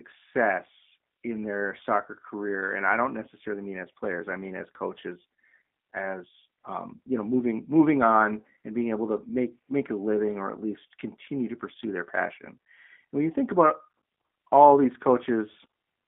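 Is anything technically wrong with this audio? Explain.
Yes. The speech is coded with G.729 throughout the clip. The codec rebuilds each frame from a vocal tract filter, a pitch predictor and a few fixed pulses, which fits an 8 kbit/s stream. Only the band from about 200 Hz to 3.6 kHz survives, so the speech sounds thin and boxed in. The coding damage is plainly audible. Voiced sounds come out slightly rough and synthetic.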